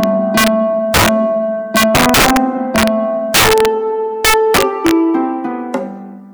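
Integer overflow cracks hit at 0.04–0.48 s, 0.94–1.09 s, 1.76–2.37 s, 2.76–2.88 s, 3.34–3.65 s and 4.25–4.91 s. Loud peaks exceed full scale by about 1 to 12 dB. They wrap to the opposite sign instead of limiting, producing violent, sharp cracks.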